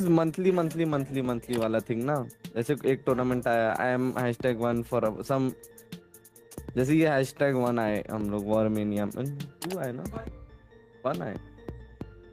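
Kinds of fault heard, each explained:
gain pumping: The gain swings by around 5 dB throughout. Likely too much gain feeding a fast limiter.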